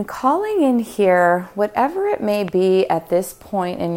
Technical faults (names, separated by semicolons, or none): loud pop